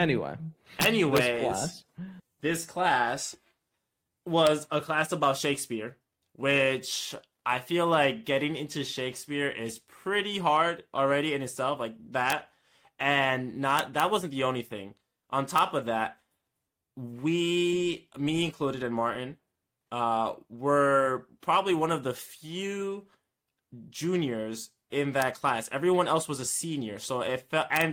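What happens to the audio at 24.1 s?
Nothing goes wrong at 24.1 s; the speech carries on intact through that moment, with no dropout, click or distortion.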